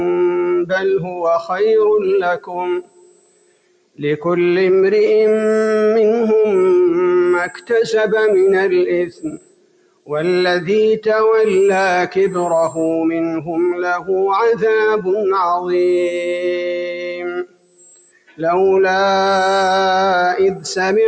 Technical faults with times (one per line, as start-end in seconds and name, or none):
0.00-21.08 switching supply whistle
0.00-21.08 noise suppressor applied to music or sounds
1.01-1.22 sound cut by the noise suppressor
2.37-4.00 sound cut by the noise suppressor
7.50-7.70 sound cut by the noise suppressor
9.07-10.11 sound cut by the noise suppressor
16.77-18.40 sound cut by the noise suppressor